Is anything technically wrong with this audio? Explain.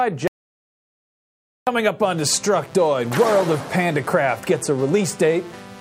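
Yes. An audio dropout to silence runs from 0.28 s to 1.67 s, about 1.4 s of missing signal. The input feed was most likely interrupted, perhaps by a lost connection or an accidental mute, while recording carried on writing silence. The sound breaks off abruptly just after the start and resumes mid-flow, and the gap between is dead silence with no room tone or background at all. Whatever happened during that stretch is simply absent.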